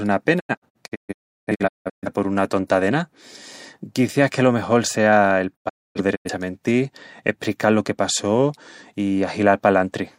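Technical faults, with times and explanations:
0.39–2.08 s, digital broadcast dropout: sound fades within 20 ms into several silent holes, the longest 0.34 s, as the receiver mutes failed frames; about 1 s is lost.
5.55–6.29 s, digital broadcast dropout: short 20 ms fades into silent gaps, the longest 0.26 s, while the receiver mutes bad frames; about 0.43 s goes missing.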